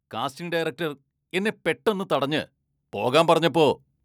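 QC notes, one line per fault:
0.37–3.84 s, automatic gain rising: the AGC judged the input too quiet and crept its gain up about 11 dB, so speech and background swell together.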